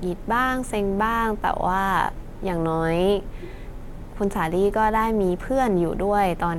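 No technical faults can be heard anywhere in the recording.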